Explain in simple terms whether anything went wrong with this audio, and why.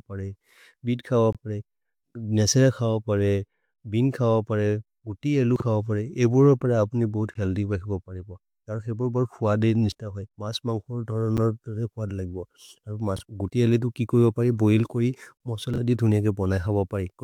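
Yes, two faults. Gaps between stream segments: the 2-second pieces' timing didn't line up, so silence filled the holes, causing brief hard-edged dropouts at 1.33 s (21 ms, after "परे बीत् खव"), 7.34 s, 11.37 s and 15.37 s (31 ms).

Chunks out of order: small 20 ms pieces of audio played later than they should have, causing short garbled jumbles at 5.56–5.62 s, 13.17–13.21 s and 15.74–15.78 s.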